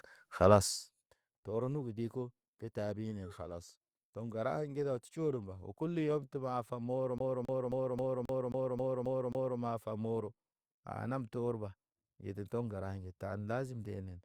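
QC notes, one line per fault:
7.18–9.59 s, CD stuck on one turn: the same 0.27 s slice of speech plays nine times in a row with a brief mute at every jump. A scratch keeps throwing the laser back one track at the same point each rotation, so the sound stutters at a fast, even rate. On the waveform the identical block repeats at a steady period, and the spectrogram shows the same pattern tiled across with thin silent gaps between copies.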